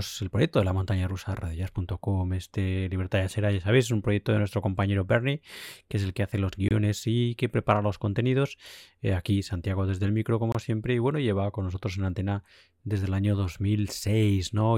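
At 6.68 to 6.71 s, just after "el que hace los", the speech drops out for about 24 ms. This is a gap at a join of encoded pieces. Two separately encoded segments were joined without trimming the encoder's start delay and end padding. The silence has smeared edges, and the speech resumes with "y que prepara los". A second gap of about 26 ms follows at 10.52 to 10.55 s, between "desde el micro" and "siempre y bueno lleva".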